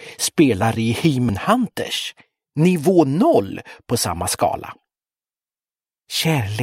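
Compressed frames were skipped twice, the decoder playing on past whole blocks of data that never reached the output. At 1.28 s the jump points to about three frames of 23.2 ms, so roughly 70 ms of audio vanishes. At 3.51 s about one frame, roughly 20 ms, is lost. At each join the sound lurches slightly ahead.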